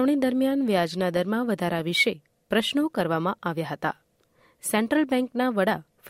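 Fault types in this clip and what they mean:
Nothing stood out on listening to this speech recording.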